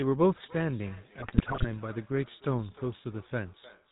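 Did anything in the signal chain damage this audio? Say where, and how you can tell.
Yes. At the codec stage, the whole clip has passed through the GSM full-rate codec. It rebuilds speech from a vocal-tract filter driven by a sparse, regularly spaced pulse excitation, and it passes nothing above 4 kHz. The damage is plainly audible throughout: the voice sounds buzzy and gravelly with a dull, band-limited top, which fits the 13 kbps full-rate GSM coder.

In call processing, feedback echo between two devices appears from 0.44 s to the end. A second device in the same room replays the far microphone's signal, that microphone picks it up again, and neither device's echo canceller removes sound played by the other device. Each phrase comes back roughly every 0.3 s, thinner and more ringing each time, peaking at about 21 dB below the direct speech.

At the network stage, GSM bit errors hit from 1.18 s to 1.67 s. 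Corrupted bits on a weak radio link reached the speech decoder, so some frames were rebuilt with wrong filter, pitch or gain values. For about half a second the voice breaks into squawks, pops and gargling, with sudden spectral bends and level jumps. The density of damage fits a bit error rate of roughly 3%.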